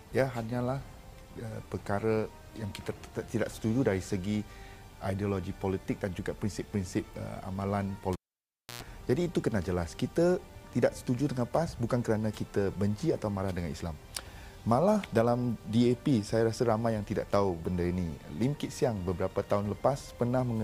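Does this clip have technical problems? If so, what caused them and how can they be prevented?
Yes. At 8.13 s a cable was pulled and plugged in while live, causing a pop and about 0.65 s of near silence. Then came 114 ms of 60 Hz mains buzz as the tip touched before the ground sleeve, and a second pop at 8.83 s. Mute the channel before repatching.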